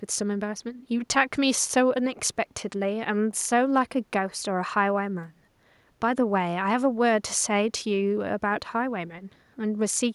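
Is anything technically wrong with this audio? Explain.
No, nothing is technically wrong.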